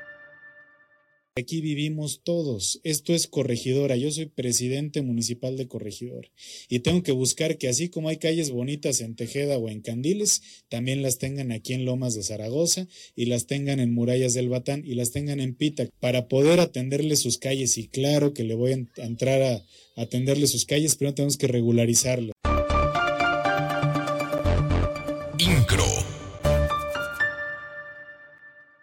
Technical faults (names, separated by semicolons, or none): periodic USB or driver dropouts